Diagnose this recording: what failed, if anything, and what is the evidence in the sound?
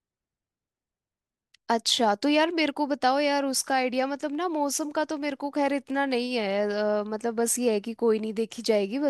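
Nothing in the speech points to a failure at any stage, from capture through to playback.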